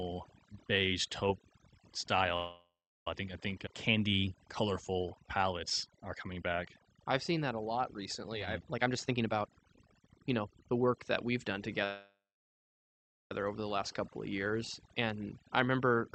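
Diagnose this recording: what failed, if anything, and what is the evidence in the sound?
The whole clip has a sunken, near-silent background flecked with twinkling specks. This is overdone noise removal at the call-processing stage: a suppressor set too hard drives individual frequency bands down whenever they sit near its noise estimate, taking quiet speech detail with them.

At 2.36 to 3.07 s, and again at 11.84 to 13.32 s, the sound stalls into a fading buzz or hiss and then silence before resuming exactly where it stopped. These are call audio freezes, likely caused by packets held up on the network so the jitter buffer ran empty. The first pause is 0.7 s long, about 0.36 s of it silent. The second is 1.46 s, about 1.14 s silent. Nothing is lost; a gap is inserted.

From 8.73 to 11.68 s the speech runs hurried at 121% speed with unchanged pitch, shedding roughly 0.7 s. A milder rush at 110% follows from 15.59 to 16.01 s. 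This is jitter buffer speed-up: after the backlog, the receiver snips out short pitch-period pieces repeatedly to cut the delay.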